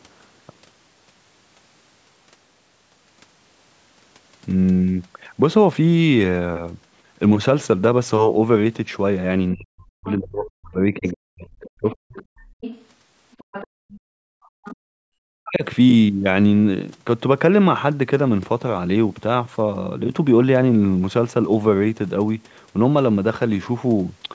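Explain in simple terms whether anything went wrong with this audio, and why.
A few things go wrong here, all around a stretch where both ends of the call seem to be talking at once.

Between 9.53 and 12.17 s, and again from 15.06 to 15.64 s, the speech sinks almost to silence in places. That's speech suppressed in double talk: with both sides speaking, the echo canceller likely couldn't tell the talker apart from the loudspeaker and turned everything down.

There's also the other side's voice leaking through, faintly. A quick scrap comes in at 10.10 to 10.14 s, then a longer, quiet stretch from 11.06 to 14.76 s. The call's echo canceller likely didn't fully scrub the loudspeaker sound out of the microphone.

Finally, the background gets gated by the echo canceller. The room sound drops right out for a short moment at 12.45 to 12.61 s, then for about a second from 13.67 to 14.78 s, coming back each time the canceller eases off.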